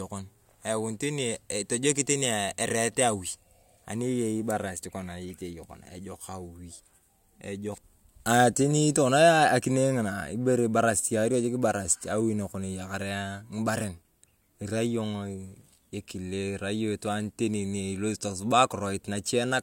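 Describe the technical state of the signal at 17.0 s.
At 17.0 s the speech signal is intact, with no technical fault present at that moment.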